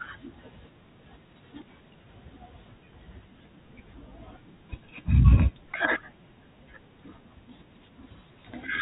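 Nothing goes wrong anywhere in this speech clip, and what comes through is simply the usual narrow, telephone-band character of ordinary G.711 phone coding.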